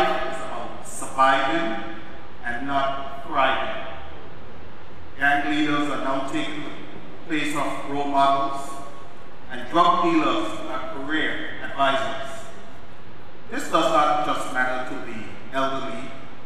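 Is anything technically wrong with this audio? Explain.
Yes. A DC offset runs throughout: a constant shift of about -26 dBFS moves the waveform off the zero line, wasting headroom. It is inaudible, but shows as a steady band at 0 Hz on a spectrogram.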